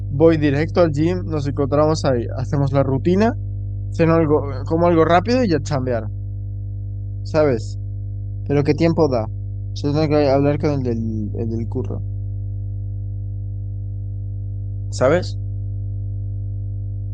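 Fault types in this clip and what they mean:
Mains hum: a steady 50 Hz tone from the power line, coupled in through a ground loop or nearby transformer, running through the whole speech clip at roughly 10 dB below it. Its fixed pitch and unchanging level set it apart from irregular, broadband rumble.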